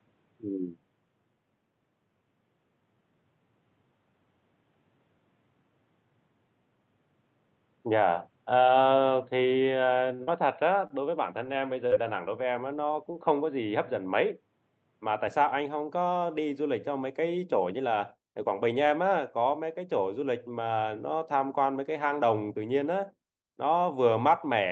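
A speech recording carried over a call path. The input most likely switched to a poorer device, and the first 15.3 s came through it. That device cuts everything above 4.2 kHz, so the sound is dull and boxy, with a faint new noise floor far below the level. At the 15.3 s switch there is no gap or jump in loudness, and the sound simply opens up. Packets arrived late twice, and the jitter buffer ran dry each time. At 10.15–10.22 s the receiver held the last sound for 40 ms, and at 10.87–10.93 s for 30 ms. Nothing is lost, but each moment is stretched, with a slight buzz or dip. There is also short concealed packet loss at 10.23–10.30 s and 11.87–11.94 s. About 40 ms was missing each time, and the decoder filled it by extending the preceding sound, which leaves a brief smear or wobble. The band-limiting and coding noise of the call path fit Opus at around 48 kbps.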